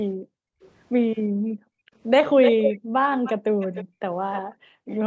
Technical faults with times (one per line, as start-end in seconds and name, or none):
0.15-0.61 background gated by the echo canceller
0.61-0.71 echo leak
1.30-1.93 background gated by the echo canceller
2.43-2.80 echo leak
2.80-4.03 background gated by the echo canceller
3.24-3.85 echo leak
4.31-4.41 echo leak
4.42-4.88 background gated by the echo canceller